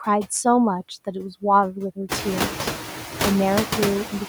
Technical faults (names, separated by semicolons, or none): noise suppressor artifacts